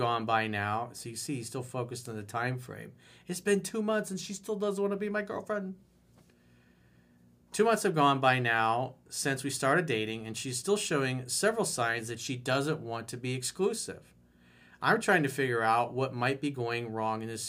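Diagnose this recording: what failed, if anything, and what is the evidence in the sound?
Nothing in the chain failed: the speech signal stays continuous and stable throughout, with no audible disturbance that would point to a problem at any stage of capture, conversion, transmission, storage or playback.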